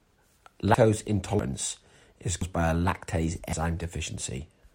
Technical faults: dropped buffer (overrun)

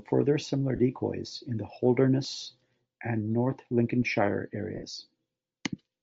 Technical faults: Bluetooth LC3 compression; lost LE Audio frames

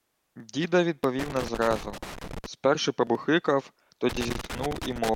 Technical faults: loose connector crackle

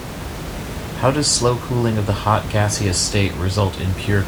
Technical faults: none

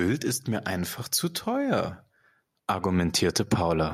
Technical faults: automatic gain rising

